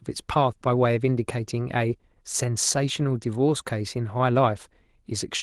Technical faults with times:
none

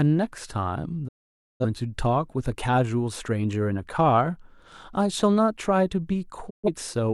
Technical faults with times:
1.07-1.65 digital broadcast dropout
6.49-6.68 digital broadcast dropout

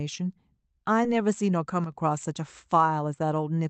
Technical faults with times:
1.84-1.92 one channel drops out

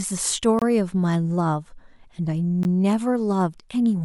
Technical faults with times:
0.59-0.62 gap between stream segments
2.63 gap between stream segments

